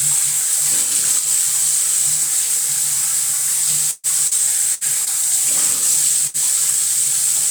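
From 3.91 to 5.10 s, repeated packet loss leaves five concealed gaps, the longest 126 ms, making the sound choppy and robotic. The spectrogram shows smeared, repeated frames within them. At 6.27 to 6.37 s, a burst of packet loss extends the last sound into a 65 ms fading tail, and the waveform then jumps ahead, skipping 60 ms.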